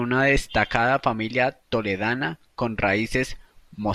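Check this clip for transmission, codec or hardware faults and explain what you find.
One hardware fault stands out: a DC step at 3.12 s, just after "destacada familia toledana con". The waveform's zero line jumps abruptly by about -34 dBFS, as happens when a converter recalibrates or an offset input is switched in, and the offset then drains away through a 20 Hz high-pass. It sounds like a brief low thump under continuing speech. On a waveform the trace lifts and sags back; a spectrogram shows a vertical broadband smear reaching down to the lowest bins.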